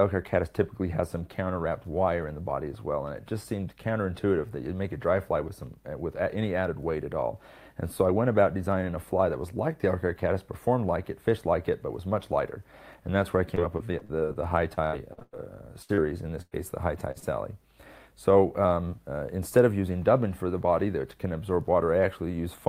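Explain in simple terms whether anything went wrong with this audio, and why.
From about 13.55 to 14.37 s, and again from 14.75 to 15.34 s, the sound turns choppy and robotic: repeated packet loss. Bits of the signal kept failing to arrive, and each hole was patched by stretching the last sound. Unlike a single dropout, the holes come one after another: six in the first stretch, five in the second, where nearly half the time is patched.

Two bursts of packet loss follow, at 15.82 to 15.91 s and at 16.41 to 16.55 s. About 60 ms and then 120 ms went missing in one go. The last sound was held and faded out, and the second one drops to silence near its end. That makes each burst a single, longer gap that ends in a jump ahead rather than a run of stutters.

Short concealed packet loss appears at 15.95 to 15.99 s, 17.11 to 17.18 s and 17.20 to 17.24 s. These lost pieces are only a few hundredths of a second long and were smoothly blended over, so each is heard as a quick smear or wobble instead of an obvious gap.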